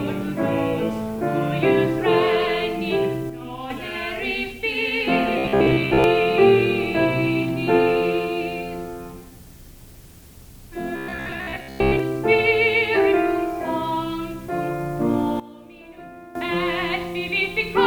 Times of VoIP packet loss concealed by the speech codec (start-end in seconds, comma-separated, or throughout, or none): none